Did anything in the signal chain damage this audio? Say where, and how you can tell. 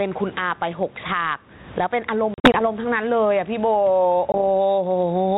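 Yes. The level swings by around 15 dB, ducking under each loud syllable and squashing the speech. The likely cause is excessive input gain hitting a fast limiter.

Network packet loss on an ADPCM call leaves hard-edged holes, scattered between 2.34 and 2.64 s with gaps up to 40 ms, and a single 20 ms hole at 4.32 s. Speech then returns slightly distorted while the decoder's predictor resynchronises.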